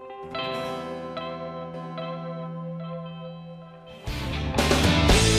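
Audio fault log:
1.74 to 4.44 s, doubled audio track: a second full-band copy trails by roughly 0.7 s, somewhat quieter, likely from a slower capture path; spectrogram shows shifted repeat, abrupt edges.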